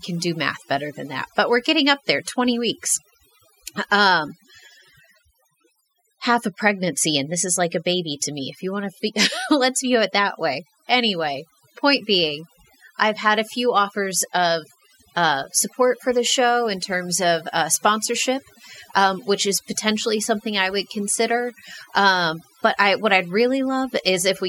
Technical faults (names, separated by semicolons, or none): overdone noise removal